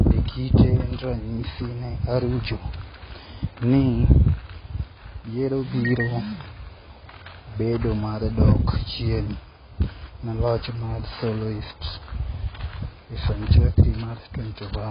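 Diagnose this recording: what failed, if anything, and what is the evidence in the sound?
Dull, band-limited speech with nothing above 5 kHz for the whole clip, and a warbling, fizzy smear on sibilants and held sounds. At the codec stage, this is likely heavy AAC compression; the low cut-off fits AAC-LC at roughly 16 kbps.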